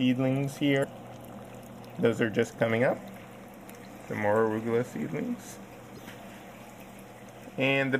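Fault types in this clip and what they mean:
Damaged data in a compressed stream: a couple of stretches of the encoded stream are corrupted, so the decoder chokes on those frames, loses its lock and has to hunt for the next valid frame header before carrying on. You get two short, glitchy blips, one around 0.80 to 0.84 s and another around 5.95 to 5.99 s, each lasting roughly 44 ms, heard as a brief chirp, squawk, click or short hole cutting into the sound.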